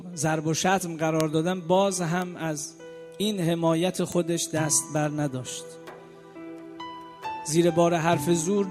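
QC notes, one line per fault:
1.20 s: bit error spike. Three consecutive samples jump to about -5 dBFS and snap back. One flipped bit shifts each value by a power of two, so a sharp tick cuts through unrelated to the sound.
2.22 s: bit error spike. Two samples leap to about -17 dBFS. The softest of the three ticks, it is still broadband and abrupt.
4.12 s: bit error spike. A single sample hits about -11 dBFS. The instant jump and return give one clean click across the spectrum.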